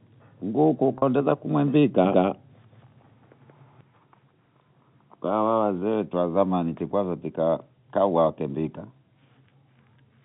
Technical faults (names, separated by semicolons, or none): packet loss with pitch repetition; doubled audio track